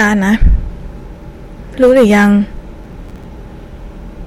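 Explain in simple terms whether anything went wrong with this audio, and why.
Hard clipping runs from 0.00 to 0.55 s and again from 1.82 to 2.30 s. During these stretches the speech was louder than one stage of the recording chain could pass, so the tops of the loudest waves were sliced off flat. Those flat edges create extra high-pitched tones that were never in the voice, which is why the loud parts sound harsh, fuzzy and crackly instead of clean.

Processor overload crackle appears from 2.84 to 3.24 s. Here the computer handling the sound fell behind. Audio is processed in very small chunks, and the rhythm of the skips fits chunks only a few milliseconds long, with somewhere around twenty of them missed over that stretch. Each missed chunk was simply dropped, leaving a tiny hole with sharp edges. Strung together, those holes make a gritty, tearing crackle over the speech that stops once the computer catches up.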